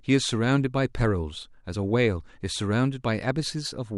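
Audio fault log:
No fault can be heard anywhere in this speech recording. There is nothing to log against any point in the audio.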